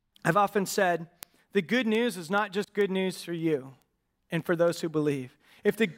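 From 0.22 s onward, word clock ticks repeat about every 0.15 s: an unlocked receiver, roughly 150 ppm off, slips one sample, leaving sharp clicks as thin vertical spectrogram lines.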